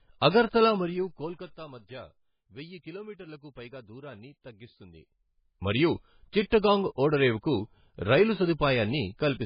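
Speech throughout, with heavy codec damage across the whole clip: the sound is watery and swirly, attacks are smeared, and nothing is present above 5.1 kHz. The likely cause is MP3 compression at a very low bitrate, consistent with something around 16 kbps. At that rate the encoder runs short of bits, so weak frequency lines drop out and return from frame to frame, and the treble is cut off at a fixed point. Between 0.60 and 1.62 s there is zipper noise. The level falls by roughly 20 dB in 2 dB steps rather than as a smooth fade. The steps come at around ten per second, and each one puts a small click into the signal. The result is an audible ticking that rides on the speech for as long as the level is moving.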